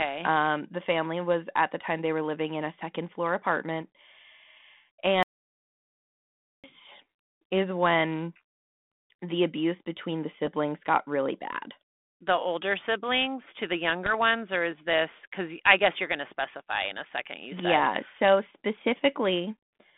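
Bit errors on an ADPCM link first appear at 3.82 s, then at 10.46 to 10.48 s and 14.06 to 14.15 s, over a narrow telephone band of about 150 Hz to 3.6 kHz that fits G.726 at 32 kbit/s. Flipped bits throw the decoder's step size and predictor off, so each hit rings on briefly as a pop with a rough, level-jumping burst. The error rate is low, a fraction of a percent, and the longest burst is the one near 14.1 s.

An audio dropout to silence runs from 5.23 to 6.64 s, about 1.41 s in which the speech cuts off mid-flow and leaves silence with no room tone underneath. The likely cause is a lost input or failed link while the recorder kept writing silence, so whatever was spoken in that stretch is gone.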